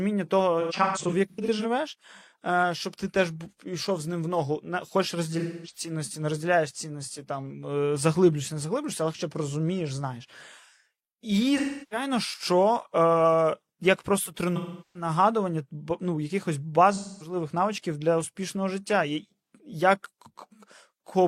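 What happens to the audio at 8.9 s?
At 8.9 s the speech carries on intact, with no dropout, click, distortion or other audible fault at that point.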